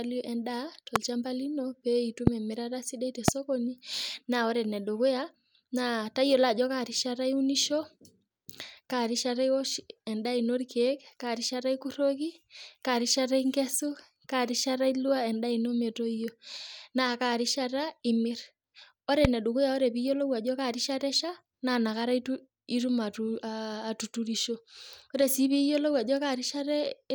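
Loud pops occur at 0.96, 2.27, 3.28 and 19.25 s. Each is a single sharp thump, about 22 ms long. It stands roughly 20 to 25 dB above the speech, which continues underneath. A sudden voltage pulse, likely from a switch or static discharge, caused them.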